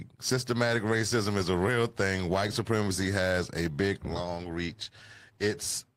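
No technical fault can be heard anywhere in this speech recording. There is no moment in it that needs a time mark or an explanation.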